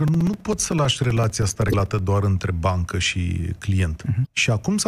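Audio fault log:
0.08–1.99 s: periodic USB or driver dropouts. Short gaps of about 4 ms of silence recur every 64 ms, heard as a steady ticking that stops before "doar între bancă".
1.69–1.74 s and 4.22–4.27 s: damaged data in a compressed stream. Corrupt frames make the decoder lose sync, producing brief glitches, the first just before "doar între bancă".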